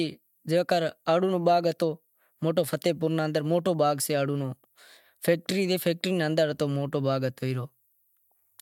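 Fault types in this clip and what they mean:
Nothing stood out on listening to the speech here.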